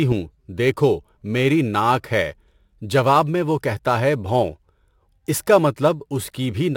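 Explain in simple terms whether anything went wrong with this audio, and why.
Crude rate conversion runs through the whole clip, from the first second to the last. The speech was stretched to a new sample rate without smoothing: extra samples were made by simply repeating neighbouring ones. The pattern points to a change from 44.1 kHz to 48 kHz. Those repeats fall in a regular rhythm unrelated to the voice, adding a faint gritty fizz that rides along with louder and brighter sounds.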